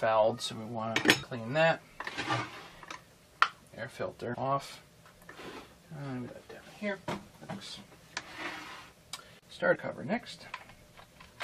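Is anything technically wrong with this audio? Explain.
Yes, compressed frames are skipped at 1.22, 3.22, 4.33–4.35, 6.26, 7.49 and 9.74–9.76 s. The decoder drops whole frames, which fits a 23.2 ms frame, and the audio jumps ahead by roughly 0.2, 0.7, 0.2, 0.3, 0.15 and 0.07 s. Each join is heard as a sudden jump forward in the audio.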